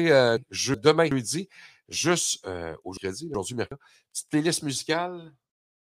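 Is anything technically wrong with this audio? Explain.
Yes. From 0.37 to 1.12 s, and again from 2.97 to 3.72 s just after "juste euh", the speech briefly jumbles. These are chunks out of order: a 372 ms chunk played one chunk late, swapping with its neighbour. Nothing is missing, but the sequence is scrambled across three hard joins.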